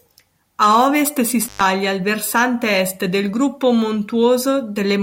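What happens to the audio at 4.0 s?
Nothing goes wrong at 4.0 s; the speech continues intact through that moment with no dropout, click or distortion.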